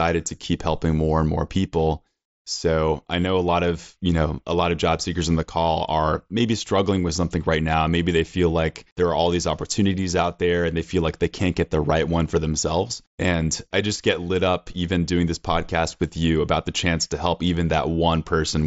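No technical faults occur in this speech clip; it carries the band-limited sound of a wideband Bluetooth headset link, with nothing above about 7.7 kHz.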